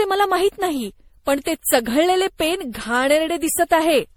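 Throughout, the speech sounds swirly, smeared and hollow, with blurred attacks. Generation loss is the likely cause: about seven MP3 passes, fitting 64 kbit/s.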